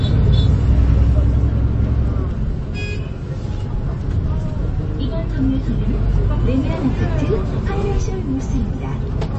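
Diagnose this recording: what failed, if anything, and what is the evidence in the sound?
MP3 compression damage runs through the whole clip, at the codec stage. Nothing is present above about 8.3 kHz, a hard ceiling where the encoder has simply discarded the treble band, and the coding damage is plainly audible throughout. The encoder most likely ran short of bits and, beyond cutting the top, dropped the weaker frequency components frame by frame, so detail comes and goes. That points to a very low bitrate, around 32 kbps.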